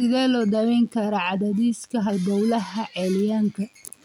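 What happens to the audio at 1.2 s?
At 1.2 s, as throughout the clip, a DECT cordless phone buzz sits under the speech. A nearby DECT handset or base transmits a burst every 10 ms. The audio circuit rectifies those bursts into a thin, steady 100 Hz buzz with many harmonics, roughly 40 dB below the speech.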